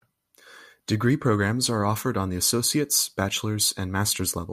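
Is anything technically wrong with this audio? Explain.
No, nothing technically wrong can be heard in this speech recording. There is no fault in it to explain.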